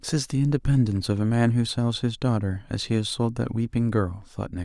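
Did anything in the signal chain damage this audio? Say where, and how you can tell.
No, nothing in the chain audibly damaged this speech.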